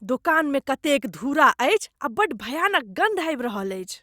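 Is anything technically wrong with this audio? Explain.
No, nothing is technically wrong with this audio.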